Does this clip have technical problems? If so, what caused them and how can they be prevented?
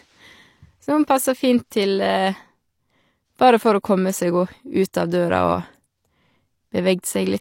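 Yes. A transform codec spread quantisation noise across blocks where sharp attacks fell late, causing pre-echo at 4.93 s and 7.02 s: a hiss smearing about 10 ms and 13 ms ahead of each onset. Using block switching or more bits on transients prevents it.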